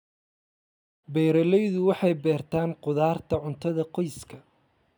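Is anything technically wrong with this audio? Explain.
No, nothing here is technically wrong.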